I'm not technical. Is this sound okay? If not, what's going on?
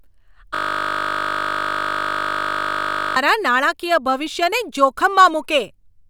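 No, there's a clear fault here: a system hang loop. From 0.55 s to 3.16 s the speech stops and is replaced by a steady buzz. What's happening is that the computer or its audio driver froze, but the sound hardware kept replaying the last little chunk it had, just 20 ms long, over a hundred times in a row. Repeating that tiny piece 50 times a second is what turns it into a buzz.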